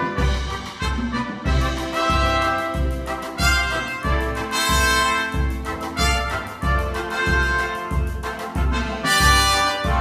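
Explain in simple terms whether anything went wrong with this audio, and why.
Nothing went wrong here: the recording runs steadily from beginning to end without any gaps, glitches or sudden changes that would point to a technical problem in how it was captured or passed along.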